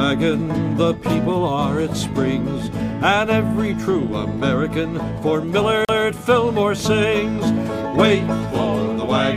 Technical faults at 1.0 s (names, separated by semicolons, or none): none